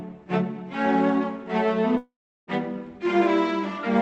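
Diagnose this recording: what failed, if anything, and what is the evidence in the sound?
What failed is most likely the network: a long network dropout on the call path. At 1.97 s the audio turns into a buzzy smear that keeps the last sound going and fades, then gives way to near silence for roughly a third of a second before the sound returns at 2.49 s. About half a second of audio never arrived, and the receiver padded the gap with concealment, which runs out and goes quiet. The Opus codec's band limit at 8 kHz is audible throughout.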